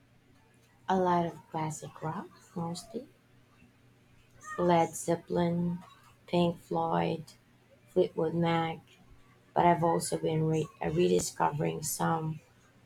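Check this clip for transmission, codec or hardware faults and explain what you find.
One transmission fault is audible: chunks out of order between 11.19 and 11.21 s. In that span, a block of about 5.33 ms arrives three chunks late and plays after the three blocks that should follow it. No audio is lost, but the sequence is scrambled and the waveform is cut at three hard joins. The speech briefly sounds jumbled and garbled.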